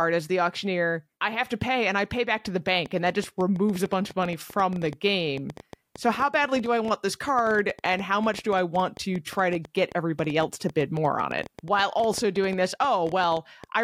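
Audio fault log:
2.86–13.65 s, train of clicks: just after "pay back to the", a run of around a hundred similar clicks ticks over the speech and into the pauses. They come unevenly, about 8.7 per second, peaking roughly 5 dB above the speech. The likely cause is interference from nearby equipment or a faulty connection or power supply.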